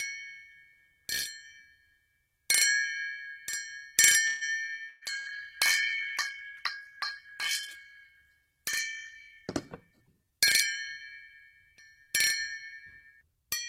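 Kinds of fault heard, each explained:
call audio freeze: At 4.27–4.44 s the sound stalls into a fading buzz or hiss for about 137 ms, likely from delayed packets, shown as smeared, flattened spectrogram frames.
burst of packet loss: At 4.89 s and 5.19 s, about 120 ms and 60 ms vanish, filled by the last sound fading out; waveforms show sudden fading envelopes, then abrupt resumption.
call bitrate drop: From 4.95 to 11.79 s the bitrate falls from 48 to 12 kbps, sound turns muffled and watery; the spectrogram's upper band empties.
jitter buffer speed-up: At 9.91–10.39 s (111%) and 12.66–13.45 s (108%), around 70 ms each is trimmed; events bunch closer, with pitch unchanged.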